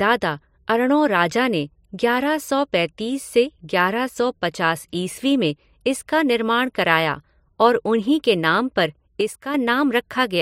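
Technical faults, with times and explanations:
4.09–4.16 s and 9.21–9.54 s, one channel drops out: a stereo channel likely cut out briefly, so the mono sum loses half its contribution. The level falls abruptly by about 6 dB, just before "सौ पचास ईस्वी में" and just after "नाम पर", then recovers.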